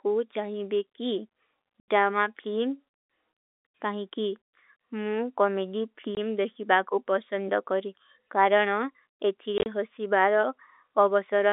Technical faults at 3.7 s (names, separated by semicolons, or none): none